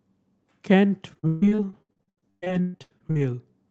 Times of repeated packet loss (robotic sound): 1.13-3.19

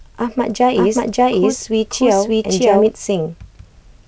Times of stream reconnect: none

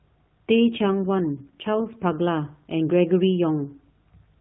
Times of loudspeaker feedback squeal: none

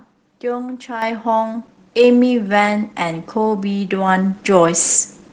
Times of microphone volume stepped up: 1.02, 4.08

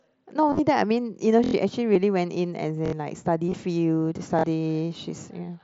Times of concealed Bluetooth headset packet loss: 0.49-0.59, 1.94, 3.48-3.54

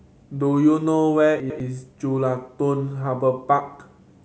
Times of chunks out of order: 1.40-1.60

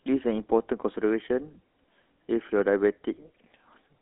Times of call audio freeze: none

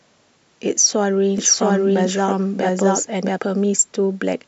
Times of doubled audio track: 1.38-3.38

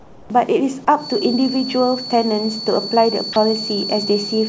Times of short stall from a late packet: none

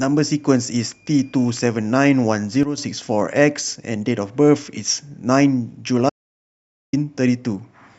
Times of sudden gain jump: 2.63-2.78

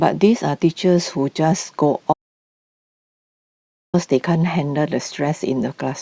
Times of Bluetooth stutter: none

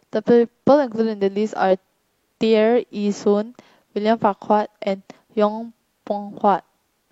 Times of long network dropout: none

